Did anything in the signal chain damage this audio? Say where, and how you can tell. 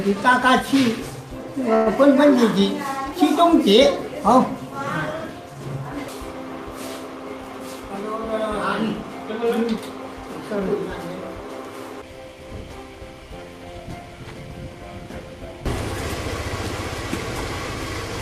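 Yes. In the network and jitter-buffer stage, a call audio freeze at 1.75 to 1.88 s likely stalled packet delivery; the receiver stretched the last sound as a fading buzz or hiss for about 108 ms, then resumed with nothing lost.

A jitter buffer speed-up from 7.60 to 8.78 s trimmed roughly a tenth of a second of pitch-period pieces, so the sound runs about 8% fast at unchanged pitch.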